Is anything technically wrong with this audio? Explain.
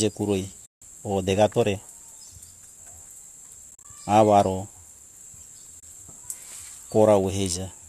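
Yes. There is AAC frame loss with muting at 0.66 to 0.82 s, a 160 ms gap; 3.71 to 3.85 s, where 80 ms is lost in short bursts spread over 140 ms, the longest around 40 ms; and 5.80 to 5.83 s, lasting 30 ms. The decoder zeroed the missing frames, and the overlapping windows fade the speech out and back in. That gives soft-edged holes, unlike a hard dropout. The speech itself carries light coding damage, likely from low-delay AAC coding.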